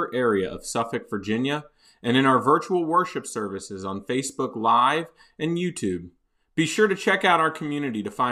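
No technical faults can be heard at any point in the speech.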